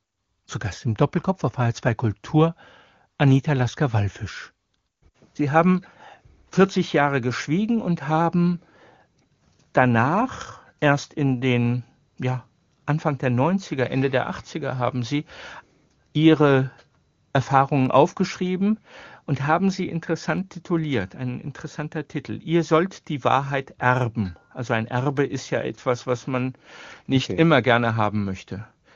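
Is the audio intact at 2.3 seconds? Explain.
Yes, the audio is intact at 2.3 seconds, with no fault at that moment.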